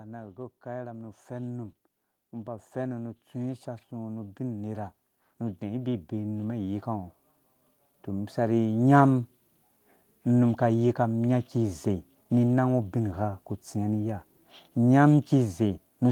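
From 0.34 s to 7.14 s the automatic gain control judged the input too quiet and kept raising its gain, by about 13 dB in total. The speech and the background noise beneath it swell together, the level creeping steadily upward over those 6.8 seconds.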